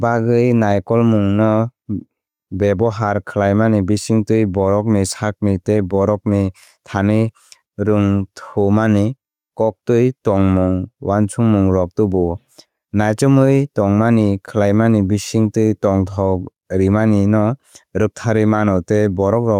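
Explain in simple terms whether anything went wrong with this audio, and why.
Gain pumping runs through the whole speech clip: loud and soft parts are squashed closer together in level, likely from gain set too high and a fast limiter reining it in.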